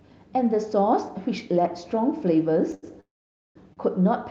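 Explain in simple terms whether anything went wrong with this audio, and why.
Yes, something went wrong: the speech stalls three times near the end, though nothing is actually lost.

At 2.74 s and again at 3.73 s there is a short stall from a late packet. A piece of the call audio arrived late, so the receiving end briefly stretched the last sound, for about 0.08 s and then about 0.03 s, and then carried on exactly where it left off. You hear a sound held a moment too long rather than a gap.

From 3.01 s to 3.57 s there is a longer call audio freeze, lasting about 0.55 s. The held sound fades almost at once, and most of that stretch, about half a second, is silence before the speech resumes from the same spot. This was likely caused by audio held up on the way. It differs from the short stalls because the pause is long enough to die away into quiet instead of sounding like a drawn-out syllable. 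The call's own compression is working as expected.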